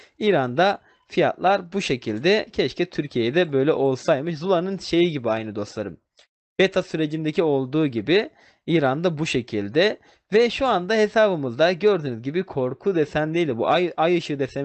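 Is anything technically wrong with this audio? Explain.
No, nothing is technically wrong with this audio.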